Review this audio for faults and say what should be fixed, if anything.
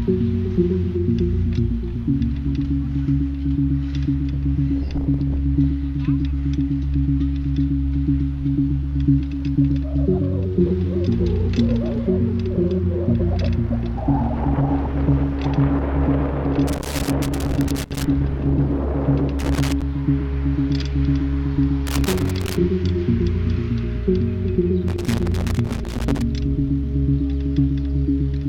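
Loose connector crackle at 16.7 to 18.0 s, 19.4 to 19.8 s, 21.9 to 22.6 s and 24.9 to 26.2 s: a worn or dirty contact is intermittently losing connection as the cable shifts, chopping the signal into irregular bursts of scratchy crackle, with pops wherever DC sits on the line. Clean or replace the affected connector and cable, and strain-relieve it so nothing moves during recording.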